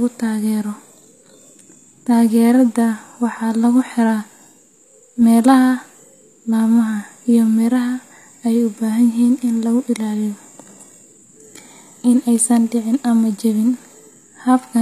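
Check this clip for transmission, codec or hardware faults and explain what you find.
One codec fault runs through the speech. HE-AAC compression, throughout: the damage is plainly audible and is likely from this codec at a low rate, fitting about 24 kbps. Only the lower spectrum is truly coded. The treble is rebuilt by copying lower bands upward under a coarse envelope, so harmonics misalign across the crossover and s sounds turn gritty and metallic. Nothing remains above 14.9 kHz.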